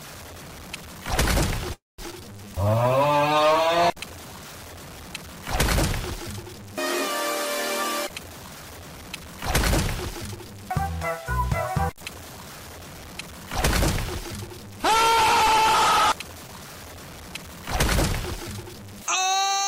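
The whole clip has a gritty, grainy edge that tracks the signal, with the error sitting only about 20 dB below it and the quiet parts breaking up into coarse steps. That sounds like low bit depth without dither, likely truncation down to something like 6 bits, so the rounding error moves with the audio instead of sitting as a steady hiss. From 1.73 to 2.00 s there's a call audio freeze. The last sound carries on briefly, then about 190 ms of the 250 ms fill goes silent before playback resumes where it left off. Nothing is lost, but the stream now runs 250 ms behind. Right after, at 2.10 to 2.13 s, comes a skip ahead. Around 200 ms of audio is dropped, and the two sides are stitched together with only a 10 ms fill, so it jumps forward abruptly. From 2.20 to 3.68 s a jitter buffer slow-down kicks in. Playback runs at 88% speed with the pitch unchanged, as repeated pitch periods pad out 183 ms, giving a drawn-out feel. 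Later there are two stretches of jitter buffer speed-up, where short pieces get trimmed to cut the delay and the audio sounds hurried at the same pitch. The first runs from 8.08 to 9.51 s at 113%, shedding roughly 200 ms. The second runs from 10.10 to 10.73 s at 109%, dropping about 70 ms. Finally, 16.47 to 16.51 s has a short stall from a late packet. The last sound is held an extra 16 ms, and nothing goes missing.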